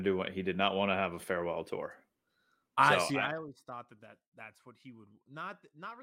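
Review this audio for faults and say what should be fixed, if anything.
From 3.01 to 3.48 s the speech picks up a fine, rapid ticking, a buzzy zipping texture that rides on the sound only while its level drops by about 20 dB. This is zipper noise. The gain is being moved in discrete jumps at around 200 per second instead of along a continuous curve, and each abrupt jump leaves a tiny click. Strung together at that rate, the clicks fuse into the audible zipper. To prevent it, interpolate the gain per sample, or smooth it with a short ramp, so the fade never jumps from one block to the next.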